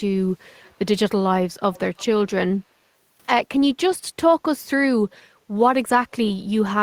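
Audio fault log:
0.62–0.75 s, 1.73–1.79 s and 1.97–2.05 s: echo leak. Faint copies of the speech return about 232 ms late, first very quietly, roughly 35 dB under the speech, then a little stronger, around 25 dB down, in the two later scraps. A loudspeaker echo canceller that likely failed to fully remove its microphone pickup would explain them. On a spectrogram, weak repeats of the preceding harmonic patterns sit offset in time. The waveform shows only small ripples riding on or after the main envelope.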